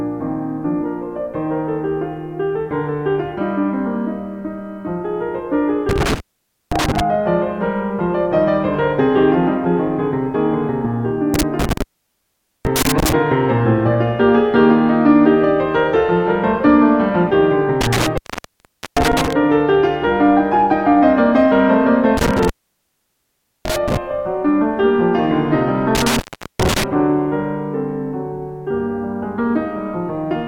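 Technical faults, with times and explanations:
5.89–7.01 s, 11.34–13.13 s, 17.81–19.33 s, 22.17–23.97 s and 25.95–26.84 s: intermittent contact. A loose cable or plug keeps breaking and remaking the connection, cutting the signal for 0.52, 0.82, 0.79, 1.16 and 0.41 s respectively. The contact scrapes as it opens and closes, so crackle marks the edges of each gap. While the line is open the sound is lost entirely, leaving only faint hiss until contact is restored.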